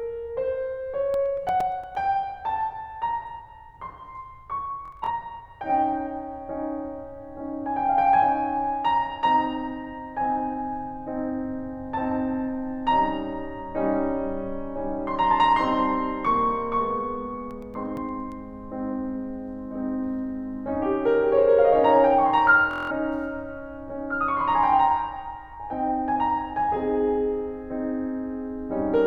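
From 1.14 to 1.95 s the music carries CD scratch ticks: eight evenly spaced clicks, each only a few milliseconds long, where a blemish defeated error correction on each disc turn. They return at 17.51 to 18.32 s, again eight ticks. Their clock-like regularity separates them from stutter.

At 4.86 to 5.11 s a Bluetooth stutter breaks in. About 160 ms of audio is lost over 230 ms, with the longest gap 46 ms. That pattern points to roughly seven lost packets. A repeated buffer slice buzzes, then playback jumps ahead. The same thing happens at 22.71 to 22.92 s, losing about 190 ms.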